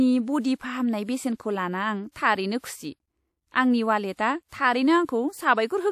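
Pre-echo appears at 2.11 s, 4.13 s, 4.48 s and 5.05 s, each a short hiss arriving ahead of a sharp speech onset and lasting about 44 ms, 59 ms, 44 ms and 36 ms respectively. The codec spread quantisation noise across each transform block, so noise meant to be masked by the loud attack leaked into the quiet stretch before it. Each onset sounds softened and smeared, with a brief grainy lead-in.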